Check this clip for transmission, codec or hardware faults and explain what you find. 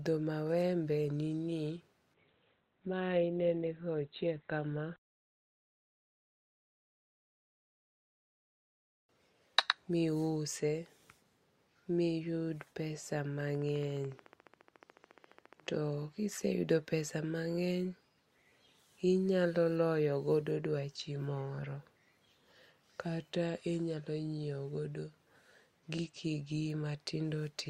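Two faults are audible in this speech clip.

From 2.14 to 8.14 s, an adaptive stream at a lower bitrate: treble vanishes above 4.3 kHz, fitting a drop from 64 to 16 kbit/s Opus. The switch is sudden and gapless, unlike a dropout.

From 13.41 to 15.75 s, a train of clicks: about thirty similar ticks at a regular 14.1 per second, roughly as loud as the speech and audible in pauses too, unlike codec artefacts. The likely cause is interference from nearby equipment or a faulty connection or power supply.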